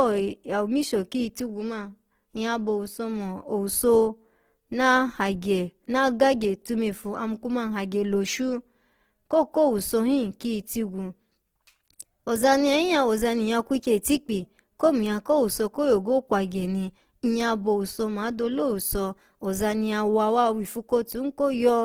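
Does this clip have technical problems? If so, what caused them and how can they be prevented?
Yes. Opus compression damage is plainly audible through the whole speech clip. The speech has a noisy, rough and grainy texture instead of clean tone. The likely cause is Opus in its music (CELT) mode at a low rate, which fits about 16 kbps. The encoder keeps each band's energy but fills starved bands with folded or noise content, so detail turns grainy. The band stays full, reaching 20.2 kHz. To prevent it, encode at a higher bitrate.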